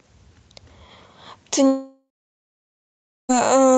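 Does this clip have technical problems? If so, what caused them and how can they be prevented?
Yes. A long network dropout runs from 1.67 to 3.31 s. The last sound stretches into a fading buzz, then about 1.2 s of silence follows. Speech resumes with the gap's content gone, likely because packets were lost. A steadier connection with forward error correction and a deeper jitter buffer would prevent it.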